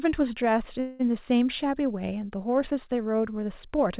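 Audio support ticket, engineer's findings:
Call audio freeze, 0.80–1.01 s: last sound stretched as a fading buzz for about 0.2 s, then resumes where it stopped, nothing lost. Likely jitter-buffer underrun from delayed packets, not a dropout gap.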